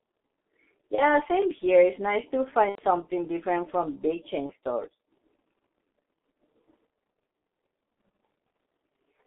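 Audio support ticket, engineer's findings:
G.723.1 codec on the call path, whole clip. Low-rate narrowband coding, consistent with roughly 6.3 kbit/s, line band about 200 Hz to 3.5 kHz. Heavy damage: speech muffled and hoarse, no top end, consonants smeared, slow-updating voice model blurring quick transitions.

VoIP packet loss concealed by the speech codec, three events. Decoder filling gaps by extrapolating last pitch and filter with falling gain. 0.95 to 1.06 s and 4.46 to 4.52 s: short buzzy or noisy smear, fits one lost 30 ms frame. 2.69 to 2.81 s: longer, fits about 90 ms lost. Tone stretches and fades. Speech stays weak briefly after recovery while the decoder's state rebuilds.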